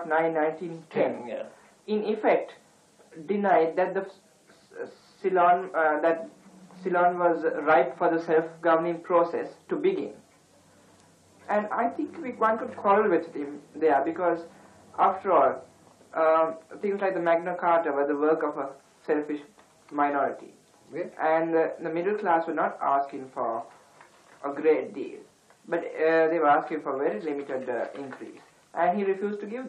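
No technical faults can be heard anywhere in the audio; the signal stays continuous and stable throughout, with steady level and timing.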